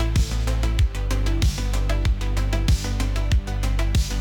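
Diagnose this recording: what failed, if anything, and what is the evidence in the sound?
What failed here is a crude rate conversion in the sample-format conversion stage, audible across the whole clip. There's a gritty, inharmonic fizz riding on the louder and brighter parts, roughly 30 dB under the sound itself. The pattern points to a 44.1 kHz to 48 kHz step done by grabbing the nearest sample, with no filtering. Samples get repeated on a fixed cycle, and that timing error turns into shifted, inharmonic copies of the material.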